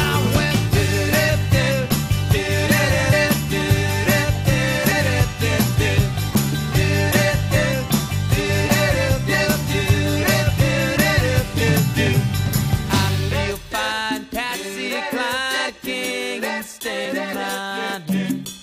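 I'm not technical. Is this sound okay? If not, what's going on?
No. Some compressed frames were skipped: pieces of the compressed file went missing or were rejected as damaged. The sound jumps ahead at 4.88–4.92 s, 6.30–6.33 s and 17.05 s, losing a brief moment each time, up to about a tenth of a second.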